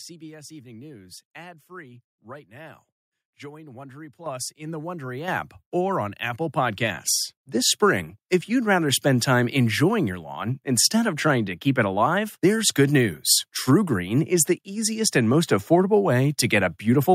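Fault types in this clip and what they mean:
Microphone volume stepped up: at 4.26 s the speech and the background noise together jump abruptly louder by about 10 dB, then at 5.28 s rise again by about 6 dB, leaving everything after that point markedly hotter than the opening. Both jumps are instant steps rather than smooth fades. This comes from the call software judging the microphone too quiet and raising the device's input volume in discrete steps.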